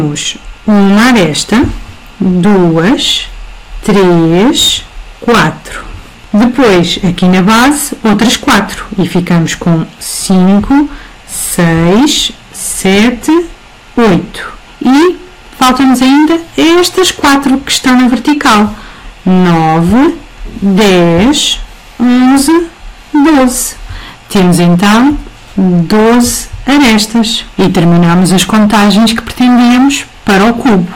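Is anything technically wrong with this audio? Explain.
Yes. Hard clipping runs through the whole clip: the signal reaches a stage about 21 dB hotter than it can pass, so nearly a third of the waveform is sliced flat. Those squared-off tops throw harmonics high up the spectrum, giving every loud passage a harsh, buzzing fuzz.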